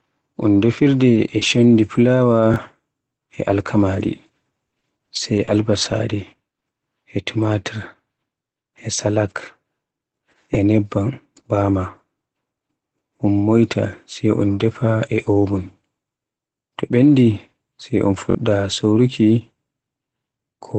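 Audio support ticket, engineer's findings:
Short concealed packet loss: brief smear at 1.13–1.17, 1.39–1.43 and 6.59–6.63 s, 20 ms filled each. Jitter buffer/decoder continuing last sound. Spectrogram: smoothed, smeared patch.

Lost packet rebuilt from error correction: rougher, noisier 20 ms at 1.15–1.17, 1.41–1.43 and 3.51–3.53 s. Opus in-band FEC copy decoded instead. Spectrogram: grainier, noisier band within the 8 kHz limit of the 20 kbps Opus path.

Repeated buffer: stutter at 2.54–2.56 s (one replay) and 18.30–18.35 s (two replays), about 20 and 40 ms lost. Playout device re-reading a 21.33 ms buffer, which fits a 1024-sample buffer. Waveform: identical blocks with hard seams; spectrogram: vertical click lines.

Repeated packet loss (robotic sound): choppy 4.65–5.87 s, five gaps, 160 ms concealed (13% of the span), longest gap 60 ms, roughly 100 ms also rebuilt from FEC. Network loss bursts. 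Spectrogram: smeared patches, broken striations.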